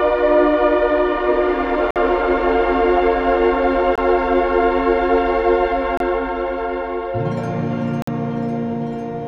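Four hard-edged holes cut through the music at 1.91–1.96 s, 3.96–3.98 s, 5.97–6.00 s and 8.02–8.08 s, lasting 52, 22, 28 and 52 ms. Each is a gap between stream segments: their two-second spacing fits 2-second segments whose timestamps leave a small hole, which the player fills with silence. Nothing is skipped; the music just stops and resumes. A waveform shows flat silent stretches, and a spectrogram shows narrow blank vertical bands with clicky broadband edges.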